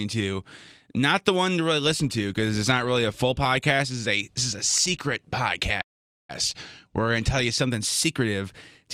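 A call audio freeze runs from 5.81 to 6.31 s, right after "this is a secret": the sound smears into a brief fading buzz, then about 0.45 s of silence. Packets were likely delayed until the jitter buffer emptied, and the sound resumes where it stopped, nothing lost, roughly half a second late.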